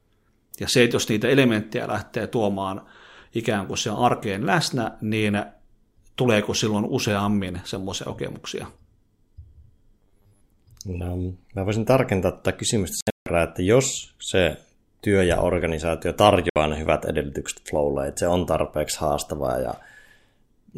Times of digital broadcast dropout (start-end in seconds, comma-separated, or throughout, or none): 13.01-13.27, 16.49-16.56